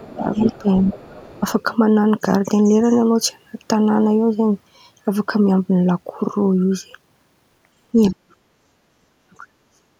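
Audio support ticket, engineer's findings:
Speech suppressed in double talk: echo canceller likely unable to split near-end talker from loudspeaker echo, attenuating both. Talker dips or cuts out in pieces at 0.0–0.95 s (drop around 20 dB), 8.1–8.32 s and 9.07–9.94 s (drops near 40 dB, close to silence).

Other side's voice leaking through: residual loudspeaker echo likely passed uncancelled into the microphone path. Far-end voice audible under the talker at 0.34–0.59 s, about 15 dB down, and 0.76–1.4 s, about 20 dB down, overlapping the opening suppression.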